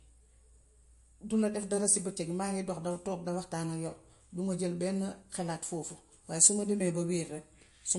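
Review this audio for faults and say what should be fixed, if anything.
MP3 compression damage runs through the whole speech clip: nothing remains above 11.3 kHz, and the sound is watery, with swirling on s sounds and smeared attacks. This is likely a low bitrate around 48 kbps, forcing the encoder to cut treble and drop weak frequency lines that flicker between frames. To prevent it, keep a lossless master and encode at a higher bitrate.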